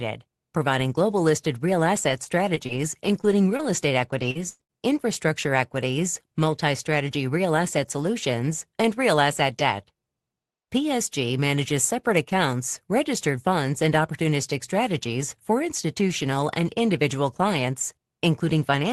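A speech recording with repeated packet loss (robotic sound) from 2.09 to 2.79 s, right after "providing global listed real", and from 3.21 to 4.71 s, ending just before "infrastructure equities multi strategy". Lost packets are patched by extending the preceding sound, giving choppy stretches with pieces missing. The longest gap is 107 ms.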